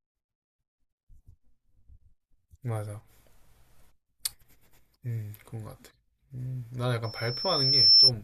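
Loudspeaker feedback squeal from 7.04 to 8.11 s: a microphone-to-speaker loop passed unity gain at 5.4 kHz, so a piercing tone swells over about a second, ending roughly 15 dB above the speech.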